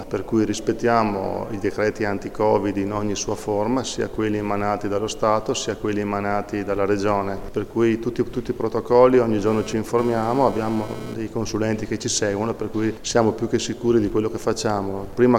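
From 9.47 to 11.14 s there's GSM phone buzz: a nearby 2G handset's data bursts get rectified, giving a harsh, raspy 217 Hz rasp about 14 dB below the sound.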